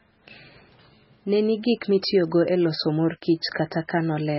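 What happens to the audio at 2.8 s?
At 2.8 s the speech carries MP3 compression damage, present throughout the clip rather than starting there. The heavy damage fits a very low bitrate of around 16 kbps, which is likely the cause. Starved of bits, the encoder drops everything above about 5.6 kHz and zeroes weaker frequency lines that flicker on and off between frames. The speech sounds dull and watery, with swirling artefacts and smeared consonant onsets.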